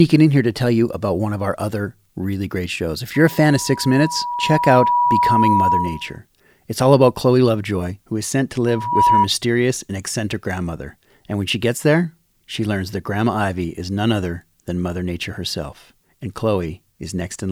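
At 3.1 s, loudspeaker feedback squeal begins. A single tone near 969 Hz swells over about two seconds. It ends up a little louder than the speech. It cuts off at 6.2 s. The microphone is hearing its own loudspeaker. At that frequency the loop gain passes one, so the tone feeds itself. At 8.66 s the same 969 Hz squeal returns. This time it rises within a fraction of a second and stops at 9.28 s.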